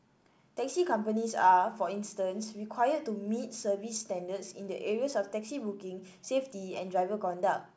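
No technical faults can be heard in this speech clip. It has passed through a call path whose coding leaves nothing above 8 kHz, which fits a wideband codec such as G.722.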